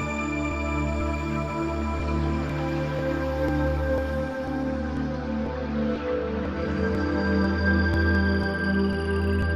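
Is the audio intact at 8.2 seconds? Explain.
No, there's a single sharp click at 8.15 s, likely dropped samples: a handful go missing, so the waveform jumps straight to a later value.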